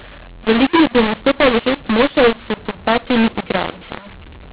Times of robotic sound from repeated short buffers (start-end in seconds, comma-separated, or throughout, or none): none